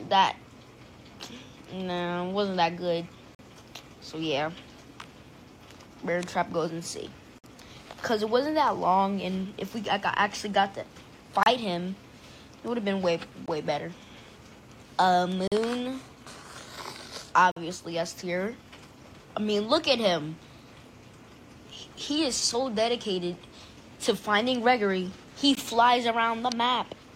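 Gaps between stream segments cut hard-edged silent holes into the audio at 3.35–3.39 s, 7.39–7.44 s, 11.43–11.46 s, 13.46 s, 15.48–15.52 s, 17.51–17.56 s and 25.55 s, each lasting roughly 16 to 53 ms. They fall on multiples of about 2 s, which fits 2-second segments whose timestamps don't quite meet, so the player pads each seam with silence. Nothing is removed, and the sound simply pauses and resumes.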